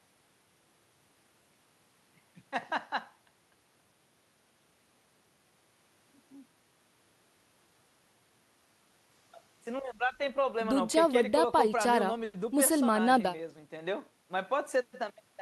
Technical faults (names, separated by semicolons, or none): none